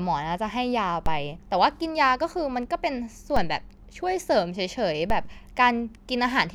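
DC steps at 1.06, 3.36 and 5.10 s: the speech's zero line jumps by about −16 to −17 dBFS, then drains away through a 2 Hz high-pass, giving low thumps or clicks.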